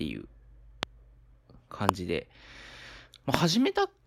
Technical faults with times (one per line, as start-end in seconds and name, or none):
0.83-0.85 loud pop
1.89-1.91 loud pop
3.34-3.36 loud pop